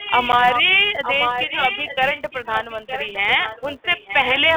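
Speech heard over a telephone-band line, with a steady tick-buzz at about 188 Hz running throughout and tracking the level of the speech. That is the sign of a filter restarted on every block, and the spacing fits a 256-sample block. Unlike mains hum, it rises and falls with the signal. A delayed copy of the speech trails the original by about 910 ms, from 0.0 to 0.63 s, 1.03 to 3.17 s and 3.44 to 4.4 s. It is fairly strong at first and noticeably weaker in the last span. The likely cause is echo leak from a loudspeaker on the far end getting past its echo canceller. The long, fixed delay distinguishes it from room reverberation. At 0.32 s there is a short hard-edged hole of about 10 ms, which is a single packet loss filled with silence. Its abrupt edges set it apart from a fade or a level dip. The G.711 telephone coding itself leaves the band limited to roughly 300 Hz to 3.6 kHz, which is normal for the line.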